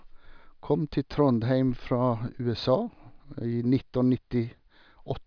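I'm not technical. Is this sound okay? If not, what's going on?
Yes, nothing in this speech recording points to a technical problem with the signal itself.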